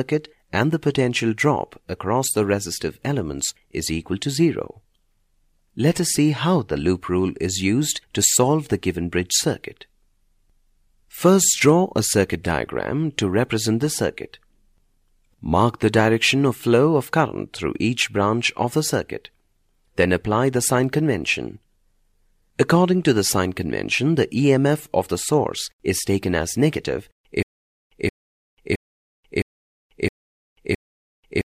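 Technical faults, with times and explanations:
27.43 to end, stutter with silent gaps: a fragment of about 275 ms repeats six times, each followed by about 390 ms of digital silence, so the burst returns every 0.66 s. This likely comes from a stalled player retrying its last buffer. The audio meant for this stretch is lost.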